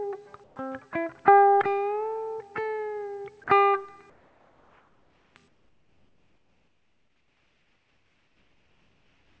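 Comfort noise in place of the background appears three times. From 0.44 to 0.56 s, the real background gives way to a flat, featureless hiss about 2 dB quieter. It happens again from 4.10 to 5.36 s, about 4 dB down, and from 5.48 s to the end, about 6 dB down. The likely cause is discontinuous transmission. The sender goes silent in pauses, and the receiver fills them with synthetic noise. The band stops near 8 kHz, which fits a G.722 call path.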